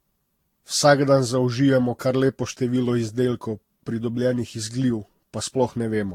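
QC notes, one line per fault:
Throughout: generation loss. The speech sounds swirly and hollow, with smeared consonant attacks and a watery shimmer, and nothing reaches above 18.3 kHz. This is likely from being decoded and re-encoded about seven times, which fits a chain of Vorbis passes near 70 kbit/s. Each pass lands on a shifted frame grid and adds fresh quantisation damage. That compounding is what sets it apart from a single low-bitrate encode: the smearing is heavier than one pass at that rate would leave.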